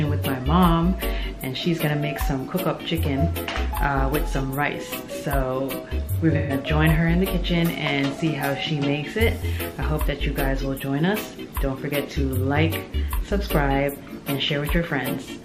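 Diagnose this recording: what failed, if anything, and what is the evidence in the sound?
The codec stage failed, with AAC frame loss with concealment. From 6.37 to 6.53 s the sound turns smeared and noisy for about 0.16 s. That fits roughly three lost frames. The decoder filled the gap by reusing the last good spectrum with altered phase.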